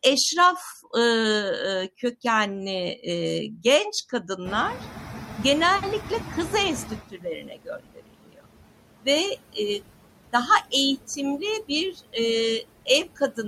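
Noise suppressor artifacts run throughout: the suppressor lowers steady background noise by about 20 dB frame by frame, so it sinks between words and rises under them.

At about 4.5 s the room noise jumps by about 22 dB, settling about 12 dB below the speech. From 4.45 to 7.04 s the noise suppressor is catching up: its noise estimate lags, letting the noise through less reduced before it sinks, with about 16 dB of reduction over 2.59 s.

Speech cut by the noise suppressor follows at 7.1 to 8.46 s, 10.17 to 10.73 s, 11.93 to 12.16 s and 13.05 to 13.45 s. The suppressor mistakes parts of the speech for noise and turns them down with the background, by as much as about 22, 21, 19 and 15 dB respectively. The loss amounts to roughly a second in the first stretch and only brief fractions of a second in the others, so those parts sound swallowed or faint.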